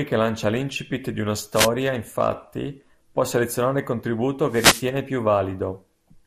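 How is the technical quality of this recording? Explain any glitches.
The recording is clearly degraded: the speech sounds dull and grainy throughout, with two bursts of radio static and one brief patch of digital blips.

Across the whole clip the top end is missing and the speech carries a gurgling, granular roughness. The likely cause is MP2 compression at a low rate, around 80 kbps to judge by the damage. Starved of bits, the encoder shuts off upper sub-bands and quantises the remaining ones coarsely.

A short swish of static breaks in from 1.53 to 1.69 s, right after "lancia l'incipit di una" and before "infatti può selezionare il". A longer burst runs from 4.47 to 4.91 s, just after "può selezionare il contributo". These are wireless microphone noise hits. The FM radio link fades as reflections cancel, so receiver noise swells up.

At 5.51 s a quick burst of noise blips sits over the speech. 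This is DAB burbling. Bit errors slipped past error correction into the MP2 data, putting short blips of noise into individual sub-bands. The sound points to a small scattering of errors touching only a few frames.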